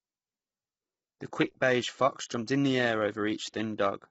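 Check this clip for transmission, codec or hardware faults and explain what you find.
The speech carries one fault across the whole clip: low-delay AAC compression. Throughout, it sounds rough and grainy, with noise filling the gaps between harmonics and nothing above 7.7 kHz. Too few bits leave coarse quantization noise between the harmonics, and the damage is heavy, fitting AAC-ELD at around 16 kbps. Unlike plain low-pass filtering, the graininess sits inside the band, not just at the cutoff, which makes this codec the likely cause.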